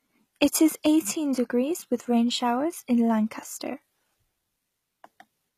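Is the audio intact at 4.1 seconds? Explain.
No. Throughout the clip, 4.1 s included, nothing sounds above 14.9 kHz, with smeared, thin detail: likely low-bitrate audio saved at a high bitrate, the earlier losses kept.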